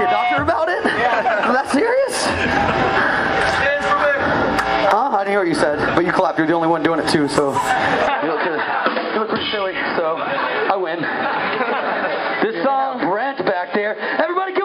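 From 8.07 s to the end, the sound turns duller and quieter with no silence at the switch, with nothing above 5.1 kHz and a new noise floor. This points to the input likely being switched to a poorer device, and shows as a flat spectrogram ceiling and a smaller waveform.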